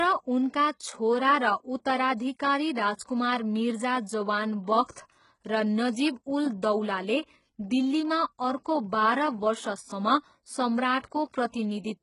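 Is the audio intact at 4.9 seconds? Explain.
No. Around 4.9 s there are two bursts of pre-echo, from 4.85 to 4.89 s and from 4.91 to 4.96 s, spreading about 35 ms and 51 ms ahead of sharp attacks. The codec's quantisation noise, sized for each loud onset, leaks into the quiet stretch before it, so each attack is preceded by a short hiss and sounds softened. On a waveform, low-level fuzz rises before each transient. On a spectrogram, a broadband smear appears just ahead of the onset.

The same moment also carries heavy HE-AAC compression, likely at a very low bitrate around 12 kbps. The spectrum stops at about 11.1 kHz, and the treble below that is rebuilt from copied lower bands. The s sounds come out gritty and metallic, and the upper harmonics don't line up with those beneath the crossover. On a spectrogram, the top band looks blocky and repeated, with a hard ceiling near 11.1 kHz.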